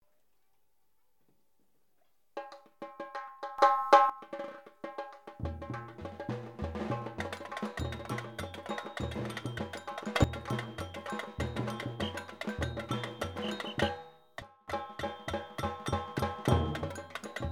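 The audio lurches in level three times, sound and background noise together: up about 14 dB at 3.58–4.10 s, up about 12 dB at 10.16–10.24 s, and down about 20 dB at 14.42–14.68 s. These sudden gain jumps likely come from digital gain switched instantly, without a ramp.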